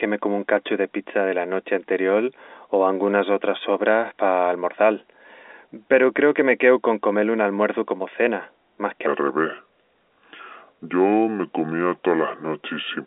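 A section at the wrong speed runs from 9.07 s to the end at 13.07 s. It plays at 0.734 times its recorded speed, likely from being fitted to the wrong clock, so the telephone-band speech turns slow and drops about five semitones.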